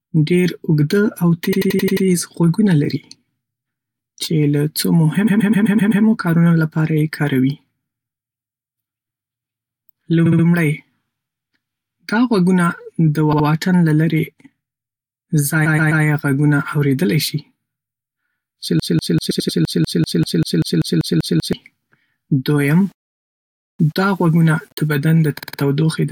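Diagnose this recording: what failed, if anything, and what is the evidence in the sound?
Repeated frames, a codec or storage fault: short stretches of speech play again back to back at 1.52 to 2.05 s, 5.26 to 6.03 s, 10.25 to 10.44 s, 13.33 to 13.46 s, 15.65 to 16.03 s, 19.30 to 19.57 s and 25.38 to 25.59 s. Each is a stutter of a block between about 63 and 128 ms. A run of compressed frames was written or sent more than once, so the decoder played it again. Together the repeats add about 2.5 s to the audio.

Broken-record loop, likely a stall in playback or the stream: from 18.80 to 21.53 s a fragment of about 194 ms repeats exactly, back to back, around 13 times. When a source stops delivering fresh data and keeps handing over the last fragment it holds, that fragment loops until data resumes. The audio that should have filled those 2.7 s is lost. The repeated-frames stutter at 19.30 s falls inside this loop.

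Low bit depth without dither, a sample-format conversion fault: from 22.61 to 24.88 s the speech turns grainy, with a distortion that follows the level and texture of the voice and worsens on quieter passages. This points to the signal having been rounded to about 7 bits with no dither. The rounding error is tied to the signal rather than spread as steady hiss, and sits roughly 40 dB below it.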